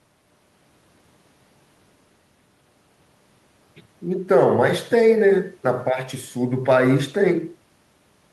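No technical faults are audible.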